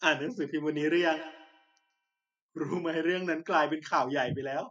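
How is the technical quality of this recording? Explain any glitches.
The recording has one clear fault: a feedback echo between two devices from 0.68 to 2.1 s. Two devices sharing the room each replay the other's microphone, and neither echo canceller removes sound it didn't play. The speech comes back about every 150 ms, thinner and ringier, peaking about 16 dB below the speech. A waveform shows evenly spaced, shrinking copies, and a spectrogram shows faint repeated traces trailing each sound.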